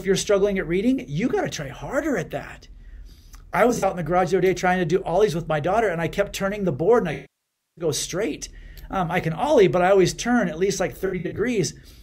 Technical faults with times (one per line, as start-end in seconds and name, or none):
3.69-3.89 AAC frame loss with concealment
7.13-7.85 AAC frame loss with concealment
11.06-11.40 AAC frame loss with concealment